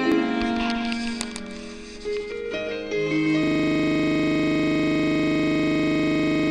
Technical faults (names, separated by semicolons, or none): system hang loop